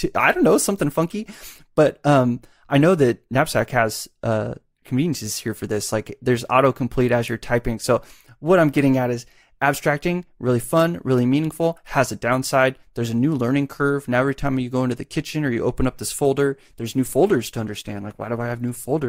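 A speech recording that switches to an adaptive stream at a lower bitrate from 16.47 s, right after "you open up this", to the end. Codec artefacts rise, consistent with Opus falling from around 64 to 16 kbit/s. Unlike a dropout, the quality changes abruptly with no gap.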